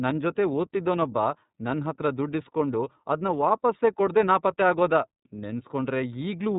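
Speech runs through the iLBC codec for the whole clip, with nothing above 3.8 kHz and a plainly audible rough, synthetic grain. A simple low-pass filter would only dull the sound. Here each block is coded separately, and the texture points to iLBC's 30 ms mode at about 13 kbps.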